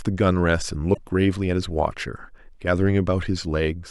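Speech clip with a corrupt frame decoded between 0.94 and 0.97 s: a brief glitch peaking at about -10 dBFS. Its length points to a couple of damaged compressed frames whose flipped bits were still decoded, so misread gains and codes put energy at the wrong frequencies.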